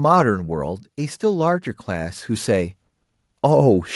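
From 0.05 to 0.92 s, automatic gain falling pulls the level down by about 4 dB. The gain control judged the input too loud or its background noise too strong, so speech and background sink together, and the waveform envelope tapers. From 1.2 to 2.79 s, automatic gain rising lifts everything by about 6 dB as the control responds to quiet input, a slow swell visible as widening waveform and brightening spectrogram.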